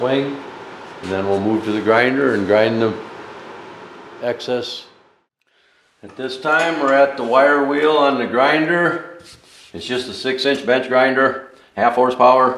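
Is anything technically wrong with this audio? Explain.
Yes. From 10.42 s to 12.57 s there is a time-stretched section: the sound suddenly runs about 1.38 times faster, rushed, yet its pitch holds steady. That is likely software shortening the passage by dropping short pieces; a plain speed-up would raise the pitch too.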